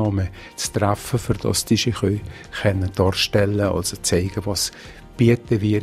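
Nothing in the audio stands out as a technical fault at any point, so there's nothing here to flag.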